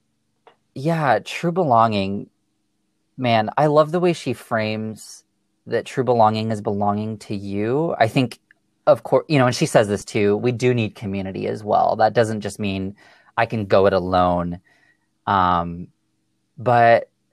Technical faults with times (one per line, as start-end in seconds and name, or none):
none